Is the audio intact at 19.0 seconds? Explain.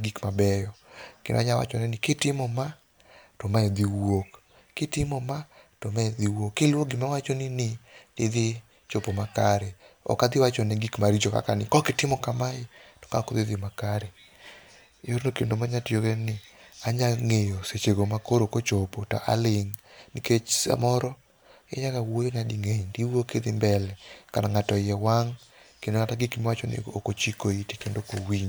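Yes, at 19.0 seconds the speech plays through intact, with no dropout, click, distortion or other fault to be heard at that point.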